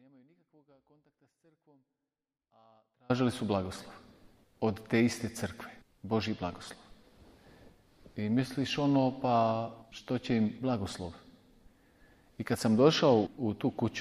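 From the start until 3.1 s the audio is only a faint trace, roughly 40 dB down, before full sound returns abruptly: an audio dropout to a faint residue, likely a break upstream.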